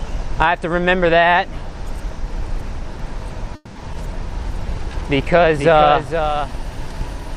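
From 3.00 s to 7.13 s a doubled audio track runs underneath: a second, full-band copy trails the original by about half a second, roughly 10 dB quieter. It has no decay or room colouring, and it cuts in and out abruptly at those points. That sets it apart from a natural echo or reverb tail. A second capture path or a misaligned edit that left two copies out of step is the likely cause.

Inside that stretch, at 3.55 s, the sound freezes. The last moment is drawn out for about 200 ms as a fading buzz, followed by roughly 20 ms of silence, and then playback resumes at 3.78 s exactly where it stopped. This call audio freeze most likely comes from packets held up in transit while the jitter buffer ran dry. Nothing is lost. The audio is only pushed 200 ms later, unlike a dropout, which removes material.

At 3.93 s to 3.97 s comes the opposite, a skip ahead. Playback jumps forward with only a 10 ms bridge, and roughly 70 ms of audio is gone. 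The two sides are butted almost directly together, so there is no hang or gap. The timeline simply lurches forward, winning back some of the delay added by the freeze.

From 4.38 s to 5.37 s a jitter buffer slow-down stretches the sound. Single pitch periods and pause fragments are repeated to add 63 ms, so this passage plays at 94% speed. Pitch stays the same, which separates it from a tape-style slowdown. What you hear instead is drawn-out sounds, as the buffer rebuilds its reserve.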